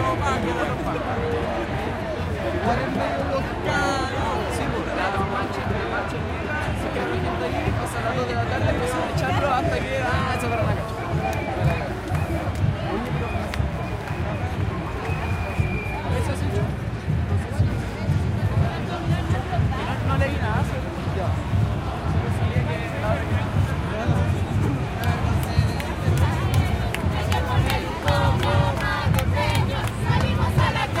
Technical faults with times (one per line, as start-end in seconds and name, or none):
0.00-31.00 computer activity noise